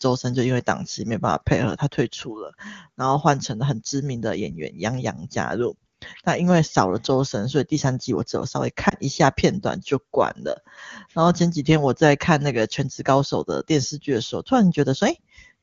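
A speech clip carried over the AMR wideband (HD Voice) codec, which sounds clean, has lost AMR speech frames around 8.89 to 8.94 s. A radio error corrupted one frame, and the decoder concealed it by repeating the previous pitch and vocal-tract settings at lowered gain, giving a brief dip or warble consistent with a single 20 ms frame.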